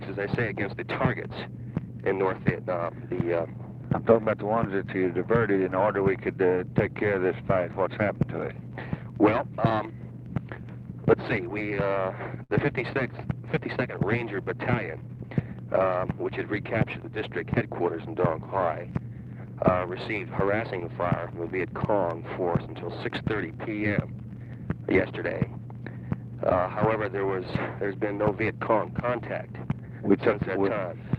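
A short stall from a late packet occurs at 12.43 to 12.52 s. A packet failed to arrive on time and the jitter buffer ran dry, so the receiver held the last sound for about 63 ms, then resumed exactly where it had stopped. Nothing is lost, but playback now runs 63 ms later than before. To the ear, a brief stretch of sound lingers unnaturally, with a faint buzzy or sagging quality.

A jitter buffer speed-up follows at 14.76 to 15.31 s. The buffer was now holding more audio than it targets. To work that backlog down, the receiver removed a string of small pitch-period-sized slices, around 70 ms in total. The audio plays at about 111% speed over that half-second while keeping its pitch, so the passage sounds rushed and clipped in its timing.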